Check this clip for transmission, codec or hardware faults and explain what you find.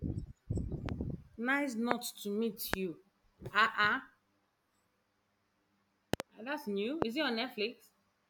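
The clip has one kind of fault: a loud pop on the speech, heard at 0.89, 1.91, 2.74, 6.14 (a double pop, lasting to 6.22) and 7.02 s. A sudden voltage step or pulse, likely from a plug, switch, static or driver glitch, enters the signal. Each is a sharp thump over continuing speech, the first gentler at around 15 dB above the speech and the rest far louder, around 25 dB above the speech. A waveform shows a tall narrow spike, and a spectrogram a thin full-height vertical stripe.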